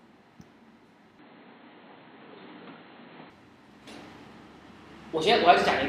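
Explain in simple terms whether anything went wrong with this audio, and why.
Between 1.19 and 3.30 seconds the audio turns duller and boxier, with nothing above about 4.3 kHz, a change in level and new background noise. The likely cause is that the input switched to a poorer device, then switched back.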